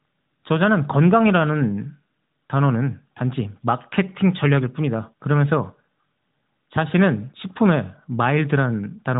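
No technical faults are audible anywhere in the recording.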